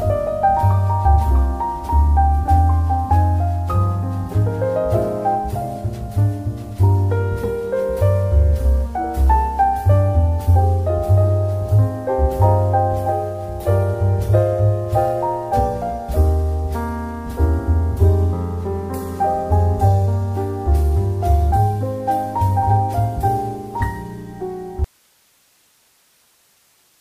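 At 24.84 s the audio cuts out abruptly in an audio dropout to a faint residue, lasting the final 2.2 s: the wanted signal most likely broke off upstream while the path stayed live, leaving only hiss around 40 dB down. The waveform collapses to a thin noise band; the spectrogram shows a sharp vertical edge into faint broadband grey.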